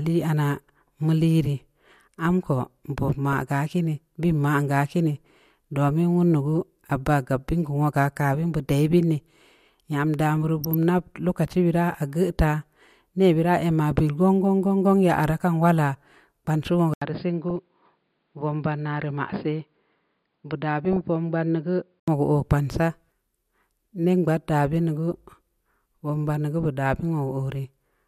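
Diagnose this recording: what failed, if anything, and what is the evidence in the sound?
DAB burbling in the broadcast codec chain: brief bursts of burbling at 3.33 s, 10.64–10.74 s (just before "nab lokaci"), 17.49–17.56 s, 18.97–19.03 s and 20.85–21.01 s. Weak reception let residual bit errors, a few tenths of a percent, corrupt MP2 samples and scale factors. On a spectrogram, isolated sub-band blocks flare for single frames.

Input switched to a poorer device at the driver or device stage: from 16.94 s to 22.08 s (switching back just before "wogu oo") the sound turns dull and narrow, about 5 dB quieter, with a fresh noise floor roughly 50 dB down. An 80 ms silence marks the switch. A likely cause is a change to a lower-bandwidth microphone or headset profile. On a spectrogram, everything above 5 kHz vanishes, and the waveform shows a gap and a smaller envelope.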